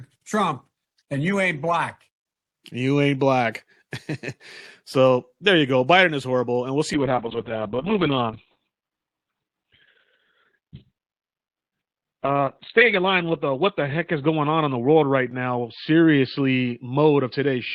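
After "horrible and we'll see", at 6.95 s, a call bitrate drop hits. Speech turns rough and muffled, cut off above 4 kHz. This fits about 6 kbps. It lasts to the end.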